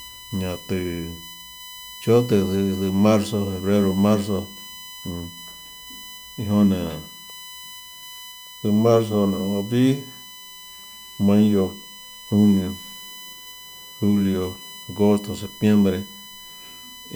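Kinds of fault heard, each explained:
USB whine: The USB bus pulls current in bursts at its 1 ms frame rate, and that pulsing load gets into the audio through a shared power rail or ground, so a fixed-pitch tone rides under the speech for the whole clip. Here it sits on a 1 kHz fundamental, with its strongest component at the third harmonic, 3 kHz, giving a thin, steady whine roughly 20 dB below the speech.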